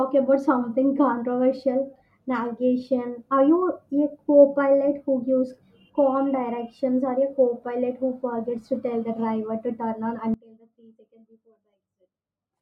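At 10.34 s, right after "driver to turn on", there's an audio dropout to a faint residue. The speech cuts abruptly to a faint leak far below normal level through the end, likely a lost connection upstream.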